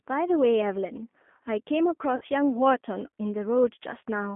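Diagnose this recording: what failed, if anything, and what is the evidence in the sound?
G.729 codec, codec stage, throughout: the speech is confined to 200 Hz–3.4 kHz and sounds plainly rough and synthetic, which fits an 8 kbit/s pulse-excited vocal-tract model.

VoIP packet loss concealed by the speech codec, network stage, 2.16–2.25 s: about 50 ms of missing packets become a fading extension of the last pitch and filter.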